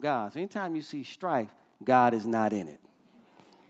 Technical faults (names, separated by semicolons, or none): automatic gain rising